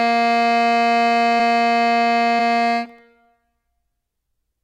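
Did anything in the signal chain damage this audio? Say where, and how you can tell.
Yes. Short concealed packet loss in the network path, at 1.37–1.41 s and 2.37–2.41 s: 20 ms went missing each time, patched by extending the preceding music into a brief smear.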